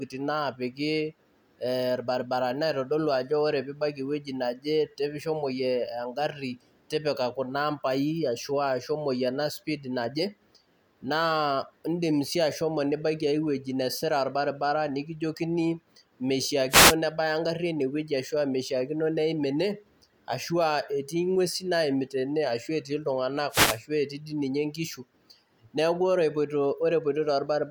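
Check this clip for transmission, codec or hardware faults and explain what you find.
Two wireless microphone noise hits occur in this speech, from 16.69 to 16.95 s, just before "nebaya engarri eneweji", and from 23.50 to 23.80 s. Each comes from the analogue FM radio link dropping into a fade, where reflected paths cancel the direct signal and the receiver's own noise rises to cover the voice. Both last about a quarter to a third of a second and are heard as a brief swish of static over the speech.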